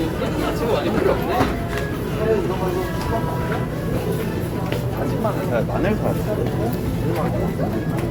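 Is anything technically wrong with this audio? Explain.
Yes. Generation loss runs throughout: the sound was likely re-encoded about three times with a lossy codec consistent with Opus near 64 kbit/s, piling up swirly, hollow smearing and blurred attacks.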